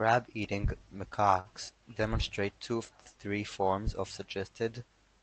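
At 1.39 s the speech stalls briefly. It is a short stall from a late packet. A packet missed its playout time and the jitter buffer ran dry. The receiver held the last sound for about 54 ms until the packet arrived. Then playback resumed from the same point, so nothing is lost. The held sound runs from 1.39 to 1.48 s, with a slight buzz or dip. Everything after it plays 54 ms later. Opus coding noise and a high-frequency cut near 8 kHz are present throughout.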